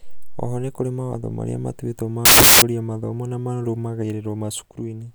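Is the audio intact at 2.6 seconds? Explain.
No. At 2.6 seconds the speech is still inside a burst of samples built from the wrong bytes, running from about 2.25 to 2.62 s. Each sample's bytes are being joined in the wrong order or alignment, so the rapidly changing low bits become the bulk of every value. It sounds like loud, harsh broadband noise. On a waveform that span fills with dense, large swings, and a spectrogram shows it as a bright band across all frequencies.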